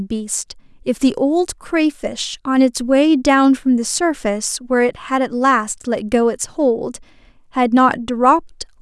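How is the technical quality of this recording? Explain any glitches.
No technical glitches can be heard in this recording.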